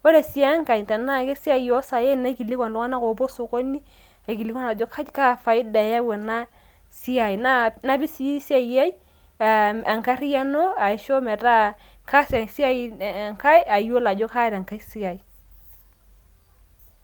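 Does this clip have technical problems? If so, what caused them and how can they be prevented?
No, the signal shows no technical faults anywhere in the recording, so there is nothing here to trace to a cause or to prevent.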